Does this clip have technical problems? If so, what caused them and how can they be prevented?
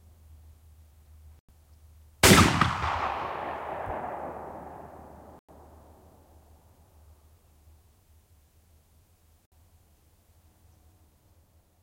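Yes. The audio drops out three times, as a digital broadcast dropout: at 1.39 to 1.49 s, at 5.39 to 5.49 s, and briefly at 9.50 s. Each time the sound cuts to silence and returns further on in the programme, so material is skipped rather than paused. The receiver lost the digital signal or received frames that failed their checksum, and it muted until good frames arrived. The gaps point to a few corrupted frames each, roughly 100 ms of programme in the first two and less in the last. A stronger, steadier signal, through better antenna placement or a wired or cached source, prevents these losses.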